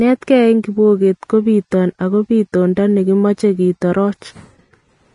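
Across the whole speech recording, the upper range sounds hissy and grainy, with sibilants turned to a rough wash and consonant attacks smeared; nothing reaches above about 10.6 kHz. The damage is plainly audible and points to Vorbis compression, likely at a low setting that fits a bitrate around 32 kbps. At that rate the encoder drops everything past the cut-off and quantises the remaining treble so coarsely that fine detail is replaced by noise of similar energy.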